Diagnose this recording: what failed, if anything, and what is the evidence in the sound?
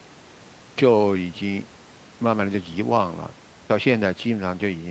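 Nothing has gone wrong here: the speech just carries the marks of an ordinary call, with the microphone processing and the Opus call path together leaving the top end stopping at around 8 kHz, which is exactly what a normal call path does.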